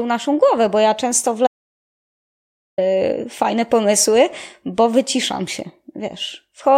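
At 1.47 s, just after "bo ja często w", the input feed appears to have been cut off, likely by a disconnected device, a failed link or an accidental mute, while the recording carried on writing silence. The result is an audio dropout to silence lasting about 1.31 s, until 2.78 s. The speech stops abruptly mid-flow, the room tone vanishes into dead digital silence, and the speech resumes just as suddenly, with whatever was said in between missing.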